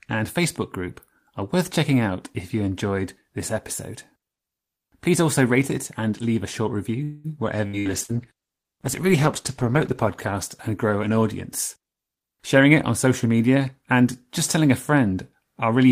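Speech carries four kinds of network fault. Just after "and leave a short" a call audio freeze fills 7.03 to 7.27 s with a fading continuation of the last sound, likely from delayed packets draining the jitter buffer. Speech resumes exactly where it stopped, so nothing is lost, unlike packet loss. Bursts of packet loss follow at 7.67 to 7.76 s, 7.79 to 7.88 s and 8.03 to 8.14 s. Each is a brief fading continuation of the last sound, and about 60 ms of speech is skipped each time, so the words jump ahead. From 7.80 to 11.27 s a call bitrate drop from 32 to 13 kbps, held at its lowest for about 2.2 s, makes the sound rough and muffled. It is a sustained quality loss, not a gap. A jitter buffer speed-up runs from 11.82 to 12.66 s before "it on" and again from 13.07 to 13.93 s before "just telling a". Speech plays at 112% with pitch unchanged and roughly a tenth of a second trimmed each time. 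It sounds hurried but stays continuous, unlike the abrupt skips of packet loss.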